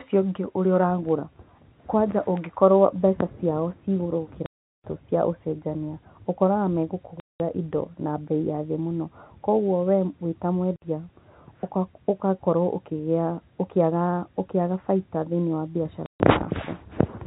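A speech recording, narrowband with nothing above 4 kHz from its G.711 telephone coding, is chopped by abrupt silent holes at 4.46–4.84 s (after "mbeca ciao ciĩ igũrũ"), 7.2–7.4 s, 10.76–10.82 s and 16.06–16.2 s. This is packet loss filled with silence, and the gap lengths are multiples of 20 ms, which fits 20 ms packets.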